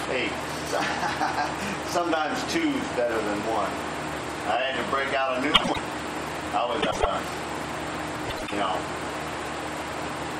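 A brief garbled flutter interrupts the sound three times: at 5.54 to 5.79 s, 6.81 to 7.06 s and 8.28 to 8.53 s. Each is a case of frames out of order. Two adjacent blocks of roughly 96 ms each, which points to runs of four frames, were decoded in swapped order, so each quarter-second stretch plays back-to-front in halves. No time goes missing.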